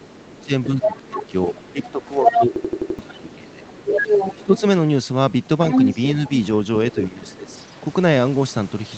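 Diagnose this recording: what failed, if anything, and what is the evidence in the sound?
Other side's voice leaking through, 0.0–2.38 s, 3.09–4.6 s and 5.7–7.61 s: a second voice sits at roughly the same level as the main speech. At the call-processing stage, the echo canceller likely failed to subtract the loudspeaker playback picked up by the microphone.

Speech suppressed in double talk, 0.19–4.62 s and 6.94–7.52 s: the main talker dips by as much as about 20 dB, then about 15 dB, over roughly 2.4 seconds in total. The echo canceller's suppressor, unable to separate both talkers, likely attenuated everything.

System hang loop, 2.56–2.99 s: an 85.33 ms slice repeats exactly five times, a stutter at 11.7 Hz, which fits a 4096-sample buffer. The driver or buffer stage stalled while the hardware kept cycling the ring buffer, losing roughly 0.4 s of audio.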